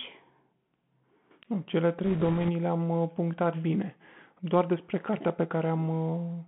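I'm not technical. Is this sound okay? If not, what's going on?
No. The Bluetooth CVSD headset codec runs throughout: this speech passed through a narrow phone-style headset link that keeps only roughly 150 Hz to 3.4 kHz, so voices sound muffled. Its simple up-or-down coding can't keep pace with sharp sounds, leaving s sounds scratchy and a grainy hiss underneath.

Bit errors on a Bluetooth voice link hit from 2.04 to 2.50 s. During that half-second, a few percent of the transmitted bits were flipped. Each wrong bit nudges the sound only slightly, so instead of loud clicks you hear a rushing, crackly noise over the speech.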